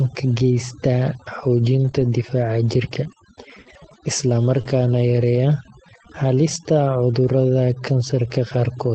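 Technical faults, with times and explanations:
Throughout: overdone noise removal. Bands near the noise estimate are pushed down hard, leaving near-silent background with twinkling specks; constant, unlike dropout hiccups.
1.79 to 4.65 s: scattered short gaps. About three brief holes, the longest around 40 ms, were patched by continuing prior sound, causing isolated ticks and smears rather than steady warbling.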